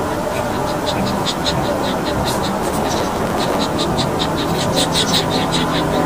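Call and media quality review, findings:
Block size mismatch (truncated), 2.61–3.63 s: 100 Hz buzz, audio rushed about 1.09x at unchanged timbre. Buffer hand-off between stages; block tails discarded each cycle. Unlike sample-rate mismatch, timbre is kept while speed changes.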